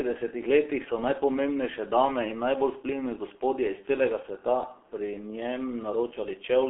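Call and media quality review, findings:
Muffled, hoarse speech throughout, consonants smeared, nothing above 3.8 kHz, thin below 300 Hz. Probable component: G.723.1 codec, heavy damage. Coarse 30 ms frames and a slowly updated voice model blur transients; the roughness fits its low 6.3 kbit/s mode.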